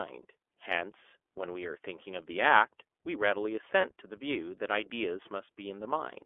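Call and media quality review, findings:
iLBC codec, whole clip: narrowband speech, nothing above about 3.4 kHz and little below 300 Hz. Plainly audible rough, slightly synthetic texture on the speech. The excitation is coded frame by frame with no carry-over, which fits 30 ms frame mode at about 13.3 kbps.

Lost iLBC frames, 3.81 to 3.85 s: brief held, slightly buzzy vowel-like tone replacing about 30 ms of audio. The decoder repeats the last pitch cycle mixed with noise. Because each frame decodes independently, the speech recovers immediately after the gap.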